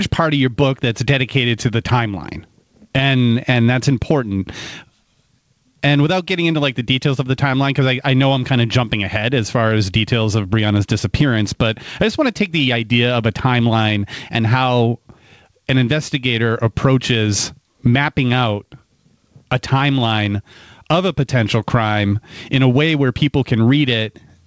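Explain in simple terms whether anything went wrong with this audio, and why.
Gain pumping runs through the whole recording. The level gets pulled down each time a loud sound arrives, so it keeps breathing up and down in a big swing. The likely cause is a microphone gain set far too high, with an automatic limiter or compressor yanking the level down on every loud moment. Loud and quiet parts end up squashed closer together.

A repeated buffer occurs at 11.51 s, just before "but I just want". The playback device didn't receive fresh audio in time, so it replayed the last tiny chunk of sound, about 3 ms long, two extra times. Because each chunk is so short, this comes across as a brief click or buzz rather than an obvious stutter, which points to a very small 128-sample buffer. A few milliseconds of real audio are lost there.

The call connection also trims away the very highest treble, which is its normal behaviour.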